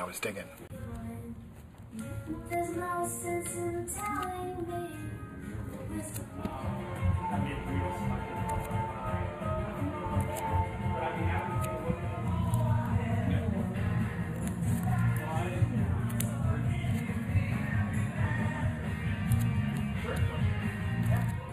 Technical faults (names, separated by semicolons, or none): channel delay (comb filtering); Bluetooth stall